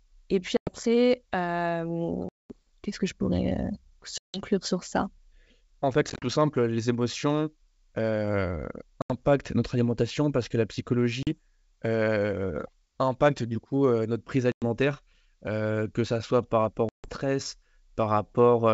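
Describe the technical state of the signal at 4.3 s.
Packet loss on the ADPCM call runs from 4.18 to 4.41 s: about 160 ms of the G.722 wideband stream drops to hard-edged silence, consistent with around fifteen lost packets. The decoder's adaptive predictor and step size drift from the sender's, so speech re-enters slightly distorted before settling.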